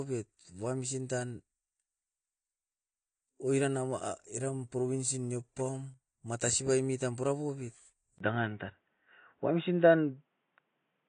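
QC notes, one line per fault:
Throughout: AAC compression. Nothing above 9.8 kHz, with plainly audible smearing and warble. This is likely low-bitrate AAC-LC, fitting around 32 kbps.
8.18 to 11.08 s: input switched to a poorer device. After "matasi baimit tam purapobit", a 20 ms gap. Then the band stops at 3.8 kHz, level shifts about 5 dB, and faint new noise sits around 55 dB down. A narrower microphone likely took over.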